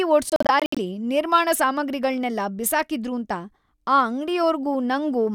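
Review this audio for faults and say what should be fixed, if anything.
Clock slip clicks run from 0.11 to 5.34 s: a soft rattle of ticks about every 20 ms, likely two unsynced clocks drifting apart by roughly a thousand ppm. Lock both devices to a shared clock or add proper resampling.

Bluetooth dropout hits between 0.30 and 0.78 s: about 213 ms of speech goes missing in scattered holes, the longest 64 ms. Likely late packets. Keep the link close and uncongested, or use a wired connection.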